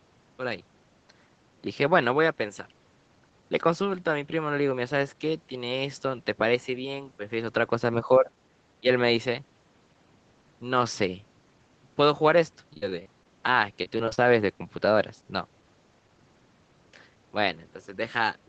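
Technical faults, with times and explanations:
8.81–8.89 s, speech suppressed in double talk: the level briefly dips by about 20 dB over roughly 70 ms, likely because an echo canceller could not separate this side's speech from simultaneous far-end echo and turned both down. The waveform shows a short pinched notch, and the spectrogram a vertical gap.
12.73–13.27 s and 13.83–14.19 s, repeated packet loss (robotic sound): six and then five closely spaced gaps, up to 43 ms long, were patched by stretching the preceding sound. About a quarter of each span is concealed, giving a choppy texture with pieces missing. On a spectrogram this appears as smeared, buzzy horizontal streaks broken by short dropouts.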